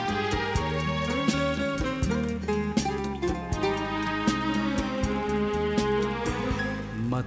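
A steady buzz at 100 Hz rides on the sound from start to finish and is present only while there is signal, falling away in the gaps. This is a resampler restarted on every block: the rate conversion, which fits a change from 24 kHz to 16 kHz, was run on each 10 ms block separately, so every block edge was filtered against missing neighbouring samples. The resulting small error at each boundary repeats a hundred times a second, so the ticks fuse into a buzz.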